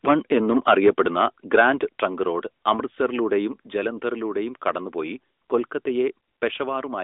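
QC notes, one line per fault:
0.88 s, microphone volume stepped down: speech and background fall about 2 dB at once, likely an automatic input-gain cut. The waveform envelope shows a sudden step.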